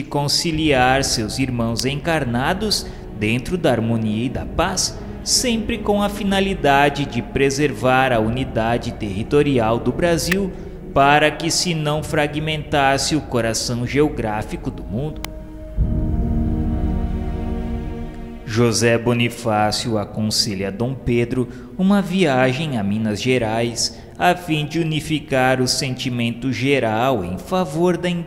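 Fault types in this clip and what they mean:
Electrical switching spike: A sharp snap lands on top of the sound three times, at 1.79, 10.32 and 15.25 s. Each is very brief. The loudest is at 10.32 s, and the other two are about 5 dB lower. The likely cause is a nearby switch, motor or static discharge arcing, with the audio line picking up that burst of interference.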